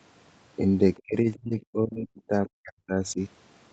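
From 0.95 to 1.02 s a very faint trace of the other side's voice leaks through, sitting roughly 30 dB below the talker. It is a brief scrap rather than a sustained second voice. The likely cause is loudspeaker playback reaching the microphone and surviving the echo canceller, which left a small residue of the far end in the outgoing signal instead of removing it completely.

Immediately afterwards, from 1.02 to 3.19 s, the talker's speech is suppressed in double talk. Over about a second and a half of that span the level drops, at its deepest by around 40 dB, so the talker seems to fade. This is likely the echo canceller failing to tell near-end speech from echo while both sides were active, and attenuating everything rather than only the echo.

Within that stretch, at 1.93 to 1.97 s, there is a short concealed packet loss. About 20 ms of audio never arrived and the receiver synthesized roughly 19 ms to cover it by extending the preceding sound before cross-fading back into the real signal. 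The result is a brief smear or wobble. The audio passes through an Opus call path whose content stops at 8 kHz.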